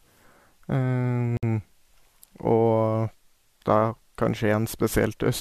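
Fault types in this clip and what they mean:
Gap at a join of encoded pieces: The speech was encoded in separate pieces that were joined without trimming. Each piece keeps its encoder's start delay and its padded last frame. At 1.37 s a silence of about 58 ms cuts into the speech and lasts until 1.43 s. Its edges are smeared by the codec. The speech then resumes where it stopped. The joins fall every 4.0 s, matching the piece length.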